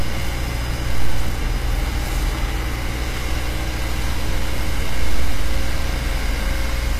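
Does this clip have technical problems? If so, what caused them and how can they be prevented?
Yes. The clip was likely squeezed through HE-AAC compression at a rate fitting about 24 kbps, so the treble throughout is copied-up, gritty and metallic, stopping at 14.9 kHz. Encoding at a higher bitrate, or with plain AAC or a lossless format, would keep the original high frequencies intact.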